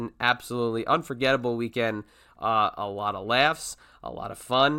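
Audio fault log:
No audible faults in this recording.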